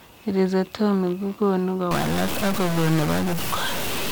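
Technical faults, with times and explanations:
1.91 to 4.11 s, stuck bit: from 1.91 s to the end of the speech, a harsh, buzzy distortion rides on the signal, and the gaps between phrases fill with a gritty noise instead of falling quiet. The likely cause is one data bit held fixed by a broken line or converter, so roughly half the samples are pushed off by a step near -20 dBFS, a fairly high bit, which is why the pause noise is so prominent.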